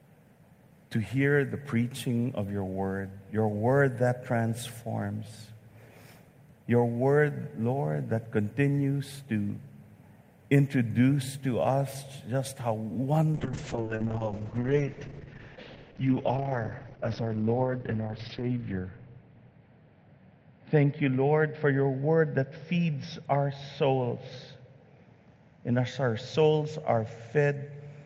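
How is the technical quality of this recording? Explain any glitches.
The recording has two glitches: a short burst of clock jitter early on, and a sustained bitrate drop that degrades the second half.

From 4.76 to 6.26 s, sample clock jitter adds a faint hiss and roughness that rises on loud, bright passages and disappears in pauses. The converter's unstable timing, on the order of a microsecond or two, creates error roughly 45 dB below the signal. Because it follows the waveform's slope, it differs from steady background noise.

From 13.34 s to the end, a call bitrate drop makes the audio rough and watery, and the top end falls from 20 kHz to about 6 kHz. This fits an encoder pushed from around 32 to 7 kbps, with the lowest rate lasting about 5.3 s. Unlike jitter, the change is a loss of detail and bandwidth rather than added hiss.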